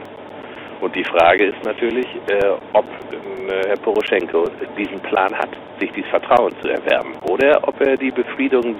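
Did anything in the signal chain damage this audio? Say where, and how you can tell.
Yes. At the driver or buffer stage, periodic USB or driver dropouts recur every 0.99 s from 0.05 s to 7.97 s, about ten in all. Each is a regular tick where around 10 ms of audio is skipped outright, as a blocked USB or driver task stalls the stream.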